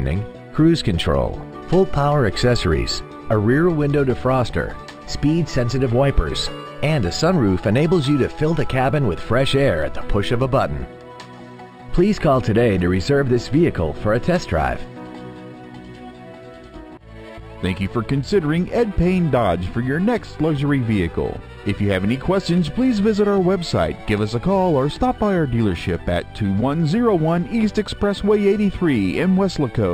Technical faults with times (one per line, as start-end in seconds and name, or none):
0.00-29.94 imaging from linear upsampling